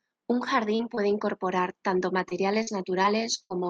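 The first fault is short concealed packet loss. It happens five times: at 0.75 to 0.81 s, 0.95 to 0.99 s, 2.29 to 2.33 s, 2.63 to 2.69 s and 3.03 to 3.06 s. Each time, 20 or 40 ms of the speech arrived too late to decode. The receiver covered the hole by extending the preceding sound, then blended back into the real signal. Each gap is heard as a quick smear or wobble.

The second fault is a burst of packet loss, from 3.42 to 3.52 s. About 80 ms in a row went missing. Concealment stretched the last sound across the gap while fading it down. This produces a brief held buzz or dying hiss. The speech then picks up again with that stretch gone, and all of this sits within the call codec's roughly 12 kHz audio band.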